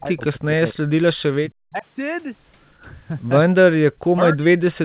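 From the very start to 0.85 s, again from 1.24 to 1.85 s, and then from 3.55 to 4.79 s, the speech dips hard, by as much as about 40 dB, and drops out in pieces, roughly half a second in each of the first two stretches and around a second in the last. That's speech suppressed in double talk, likely caused by an echo canceller that couldn't tell the talker from far-end echo while both sides spoke, so it turned everything down.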